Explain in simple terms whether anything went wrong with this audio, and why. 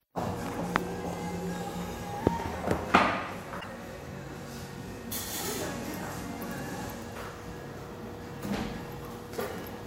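Something did go wrong, briefly, at about 3.60 to 3.66 s: a corrupt frame decoded. A small piece of the compressed data, about a couple of frames' worth, got scrambled, and the player played it anyway instead of hiding it. The bad numbers put sound at the wrong pitches, so you hear a short chirp or burst of noise that doesn't belong. Unlike a dropout, which leaves a gap or a dip, this adds a foreign noise.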